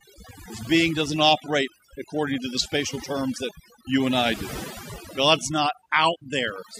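Throughout the speech, overdone noise removal cuts individual bands near its noise estimate, so the background breaks into twinkling, warbling specks, unlike a gate's all-band muting.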